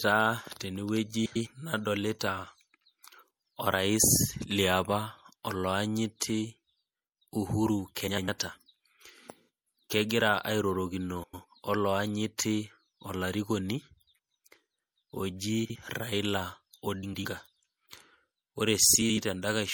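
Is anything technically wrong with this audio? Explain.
Yes. The speech carries watery, swirly artefacts throughout. The treble is dulled and sibilants are metallic, and this likely comes from MP3 compression at a low bitrate, which fits roughly 64 kbps. On a spectrogram, the top band ends at a hard ceiling, with speckled, flickering patches beneath it.

Frames out of order occur at 1.25 to 1.47 s, 8.07 to 8.29 s, 11.23 to 11.45 s, 15.65 to 15.76 s, 17.03 to 17.25 s and 19.01 to 19.18 s. Each time, two adjacent blocks play swapped. The blocks are mostly 104.5 ms long, 52.2 ms at 15.65 s and 78.4 ms at 19.01 s. The result is a garbled flutter.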